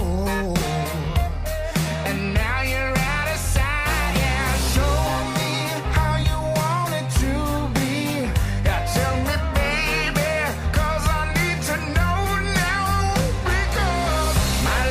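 Nothing here stands out as a technical fault; the audio just runs along without any glitch or hiccup worth pointing to.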